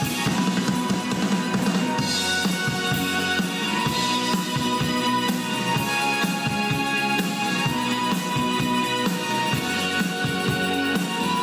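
No technical faults are audible.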